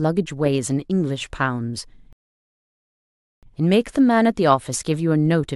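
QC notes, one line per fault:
2.13 to 3.43 s, rebuffering stall: the speech cuts to dead silence for 1.3 s, then resumes exactly where it stopped, with nothing skipped. The player ran through its downloaded audio and paused until more data arrived, so the gap adds time without losing any sound.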